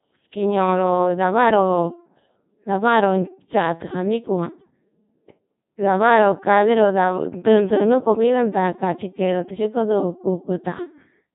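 From start to finish the speech carries Codec 2 vocoder damage, heavy throughout. It sounds robotic and buzzy because the decoder rebuilds the voice from sine waves using only pitch, voicing and envelope, which fits a rate near 2.4 kbit/s. A spectrogram shows neat synthetic harmonics and nothing above 3.8 kHz.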